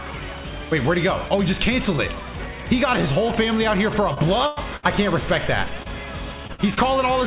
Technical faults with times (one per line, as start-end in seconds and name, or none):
4.14-4.18 short concealed packet loss
4.46-4.85 burst of packet loss
5.83-5.90 short concealed packet loss
6.47-6.78 short concealed packet loss
6.53-6.60 burst of packet loss